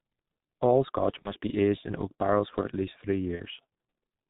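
Speech that sounds muffled and hoarse throughout, with nothing above 4 kHz and blurred consonants: heavy G.723.1 codec damage, consistent with its 6.3 kbit/s mode. The coarse 30 ms frames and slowly updated voice model smear fine detail. Two brief spots, at 1.22 to 1.32 s and 3.35 to 3.41 s, turn buzzy or noisy and fade before the voice recovers. This is VoIP packet loss concealed by the speech codec. Each gap fits a single lost 30 ms frame. The decoder stretched its last pitch and filter at falling gain, and the voice stays weak for a moment afterwards because each frame builds on the last.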